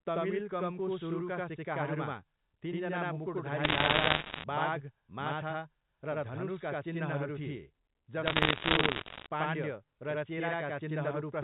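The whole recording sounds doubled, with every syllable answered by an equally loud slap about 85 ms later. This is channel delay (doubling): one channel runs late by a long buffer, which fits a 4096-sample buffer, and both channels are folded to mono, so the late copy stands apart.

From 3.64 to 4.44 s, and again from 8.26 to 9.26 s, sharp ticks and crackle sit over the speech while the underlying sound stays intact. These are bit errors on a digital phone line. Flipped bits in the G.711 mu-law stream, around one or two in every hundred, each corrupt a single sample, and hits on the top bits, or on the sign of a loud sample, jump to large values that click.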